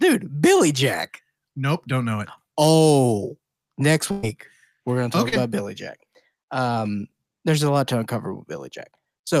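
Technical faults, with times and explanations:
4.11 to 4.25 s, burst of packet loss: a held buzz or fading hiss stands in for the sound for about 113 ms, then the audio picks up further along. About 120 ms never arrived in time, so the receiver stretched the last sound and faded it before resuming past the gap.
5.29 to 5.34 s, short concealed packet loss: a brief smear or wobble lasting about 31 ms, after which the real audio blends back in. Around 40 ms of the call reached the decoder too late, so the receiver continued the preceding sound to cover the hole.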